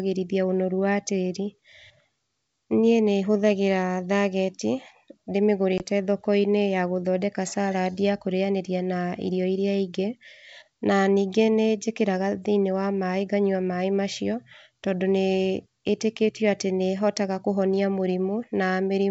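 At 5.78 to 5.83 s, packet loss on the ADPCM call, likely a couple of packets, leaves about 20 ms of hard-edged silence. Speech resumes with brief distortion as the G.722 decoder's predictor and step size resynchronise with the sender.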